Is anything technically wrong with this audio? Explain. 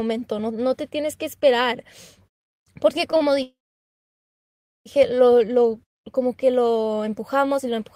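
Yes, there are two timing problems in this speech.

From 3.17 to 3.22 s there's a short stall from a late packet. One packet arrived late and the jitter buffer ran dry, so the receiver held the last sound for about 38 ms. You hear a brief drawn-out sound with a slight buzz or dip, then speech resumes right where it paused, with nothing lost.

From 3.42 to 4.88 s the audio freezes for about 1.4 s, a call audio freeze. The likely cause is packets held up in transit, emptying the jitter buffer. The last sound is stretched into a short buzz or hiss that fades, and then about 1.3 s of silence follows. Speech picks up exactly where it stopped, so a gap has been inserted rather than anything dropped.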